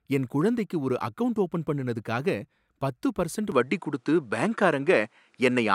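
Speech clip; from 3.52 s, right after "பத்து பர்சண்ட்", the sound turns duller with nothing above 11.4 kHz, a small level jump and a faint new background noise, with no gap at the change. This is likely an input switched to a poorer device. The new noise and level shift, not just lost treble, set it apart from plain filtering.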